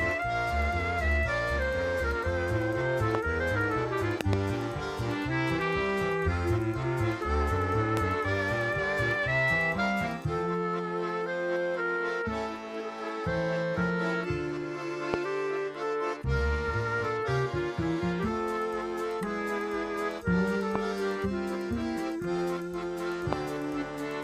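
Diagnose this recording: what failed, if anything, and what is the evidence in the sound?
Loud pops at 3.15, 7.97, 15.14, 20.76 and 23.33 s, plus a double pop from 4.21 to 4.35 s, around 20 dB above the sound. These are likely voltage spikes in the analogue wiring.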